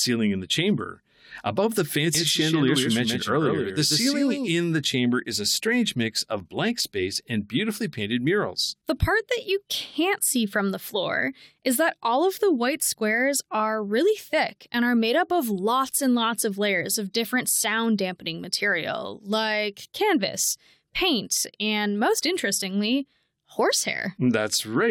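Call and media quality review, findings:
Doubled audio track, 2.15–4.51 s, ends right before "the chamber is a". Dry full-band copy trailing around 150 ms, roughly 5 dB down, no room tail, starts and stops abruptly. Likely a slower second capture path mixed in.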